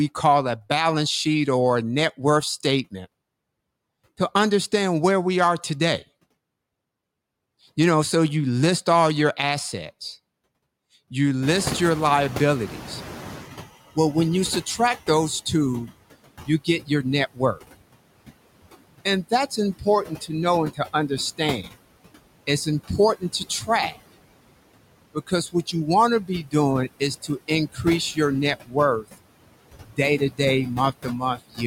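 Noise suppressor artifacts run through the whole of this speech recording: the suppressor pulls steady background down by about 21 dB frame by frame, so the residue sinks in the gaps and swells under the voice. Noise suppressor catching up is heard from 11.42 to 13.68 s, when the room noise jumps by about 23 dB around 11.5 s. The suppressor's noise estimate lags, so the louder background leaks through before sinking over those 2.26 s, reaching only about 14 dB of reduction and sitting about 14 dB below the speech. Speech cut by the noise suppressor occurs at 16.46 to 17.85 s, just after "you subtract those two", then at 19.05 to 21.68, 22.47 to 23.96, 25.14 to 29.23, 29.84 to 30.4 and 31.03 to 31.6 s. Each time, the suppressor mistakes part of the speech for noise and turns it down by about 15 to 22 dB, so short fragments of a few tenths of a second sound swallowed or faint.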